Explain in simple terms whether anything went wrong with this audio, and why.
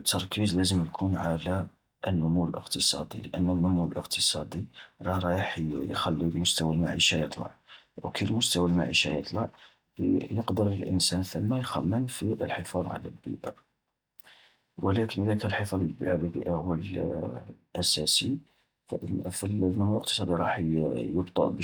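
Nothing went wrong here: the speech recording shows no audible technical faults anywhere, so there is nothing to flag.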